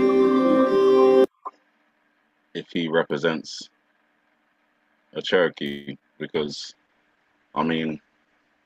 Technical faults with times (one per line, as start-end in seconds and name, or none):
5.67-5.89 call audio freeze
5.99-6.03 short concealed packet loss
6.36-8.65 call bitrate drop